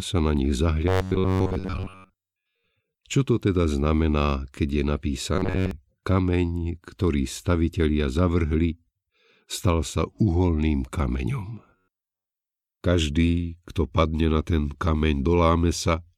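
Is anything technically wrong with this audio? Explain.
Yes. Robotic sound from repeated short buffers occurs at 0.88 to 2.65 s, 5.36 to 5.71 s and 11.76 to 12.31 s. The speech becomes a metallic buzz at 93.8 Hz, likely from a roughly 10.7 ms chunk looping while most new audio is skipped. The spectrogram shows rigid harmonic stripes at multiples of 93.8 Hz, and the waveform shows identical repeating cycles.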